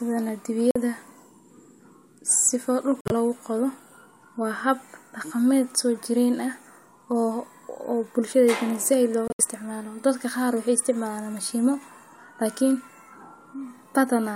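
At 0.71 to 0.76 s, 3.01 to 3.12 s and 9.28 to 9.41 s the speech falls into corrupt frame muted gaps. The decoder rejected damaged compressed frames and inserted dead silence. The holes start abruptly and keep the timing, unlike a skip or smoothed concealment.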